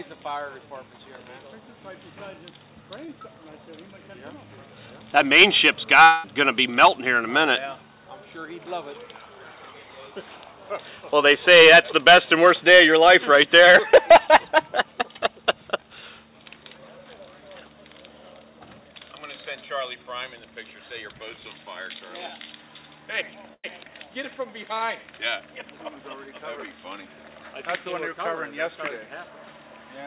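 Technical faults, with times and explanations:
3.06–3.10 s, short concealed packet loss: about 20 ms never reached the decoder in time, so it extended the preceding sound for 16 ms and blended back. This is heard as a brief smear or wobble.
6.04–6.26 s, long network dropout: about 200 ms of audio is missing, and the last sound is stretched into a fading buzz or hiss before the audio resumes further on. The cause is likely a network outage. On a spectrogram the pattern freezes and dims, and the waveform envelope tapers before an abrupt restart.
23.54–23.66 s, burst of packet loss: roughly 100 ms of consecutive audio arrived too late or not at all. The receiver held the last sound for about 98 ms while turning it down, so it is heard as a fading held buzz or hiss, then a jump ahead. On the spectrogram a smeared, decaying band sits below 4 kHz, the ceiling of this G.711 call path, and the waveform shrinks in level.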